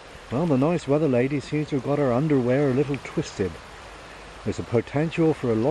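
No technical faults can be heard anywhere in the audio. There is nothing to place in time or trace to a cause.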